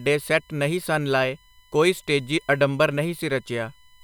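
There's USB whine all the way through the speech: a steady 1 kHz tone, loudest at its 3 kHz harmonic, sitting about 35 dB under, from bus current leaking into ground.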